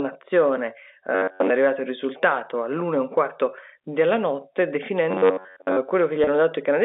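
From 1.15 to 1.50 s, just before "è arrivato il risultato", and again from 5.11 to 5.77 s, after "un quarto della notte", the speech turns into a rigid metallic buzz near 94 Hz: robotic sound from repeated short buffers, likely from a stalled stream being filled by looping roughly 10.7 ms of audio while most of the real signal was skipped. At 6.24 s, within the 300 Hz to 3.7 kHz telephone band of the G.711 line, a 30 ms packet loss is bridged by pitch repetition, heard as a brief held, buzzy note.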